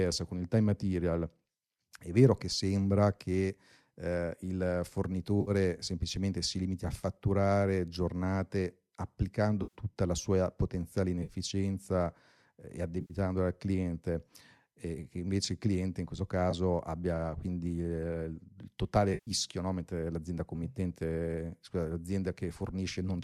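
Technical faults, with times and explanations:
5.41 to 19.31 s, AAC frame loss with concealment: six short dropouts at 5.41–5.51 s (before "semplicemente si limiti a"), 9.63–9.75 s (before "la sua potenziale"), 11.23–11.33 s, 13.01–13.14 s (between "eh e" and "al cliente e che"), 16.51–16.54 s and 19.14–19.31 s. The decoder, likely low-delay AAC with roughly 10 ms frames, rebuilds each gap from the last good spectrum. Each one sounds like a brief smeared, noisy, phasey patch.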